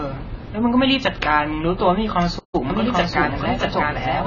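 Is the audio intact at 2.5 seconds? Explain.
No. From 2.38 to 2.55 s the speech halts in a playback stall, most likely the player running short of data or being blocked until it recovered. Unlike a dropout, which loses a chunk, the sound resumes after the silence.

Across the whole clip, including this moment, there is also heavy AAC compression. Nothing above 7 kHz is present, and the speech sounds dull and smeared, with a warbling, fizzy edge. That fits a likely low AAC-LC bitrate near 16 kbps, and it is this texture that sets it apart from a plain low-pass filter.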